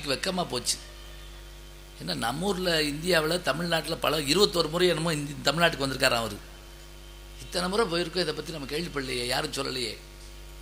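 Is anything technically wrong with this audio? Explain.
No, nothing stood out as technically wrong on listening.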